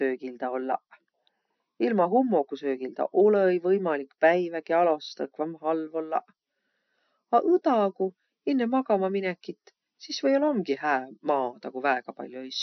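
MP3 compression runs throughout this speech clip: nothing is heard above about 6.1 kHz, with plainly audible watery smearing that likely comes from a starved encoder, fitting roughly 48 kbps.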